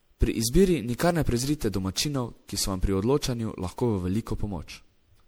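From start to finish the speech carries generation loss, likely from repeated MP3 encoding at around 96 kbit/s, perhaps seven passes. It sounds swirly, hollow and smeared, with blurred consonant attacks, more damage than one encode at that rate would leave, because each pass stacks new noise and spectral gaps.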